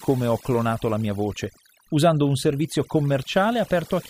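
From start to finish the speech carries overdone noise removal. A noise reduction stage was run too aggressively on a noisy recording, pulling individual frequency bands down or out entirely whenever their level sat close to its noise estimate. Because that threshold catches low-level parts of the speech as well, quieter detail is stripped along with the noise. What remains of the background is broken into twinkling, warbling specks rather than a steady floor.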